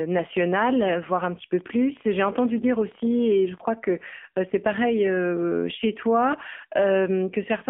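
AMR narrowband mobile codec damage runs through the whole speech clip. The band is squeezed to roughly 200 Hz to 3.5 kHz, and a frame-by-frame vocal-tract model rebuilds the voice from sparse pulses, leaving a plainly buzzy, synthetic edge that fits a 7.4 kbps mode.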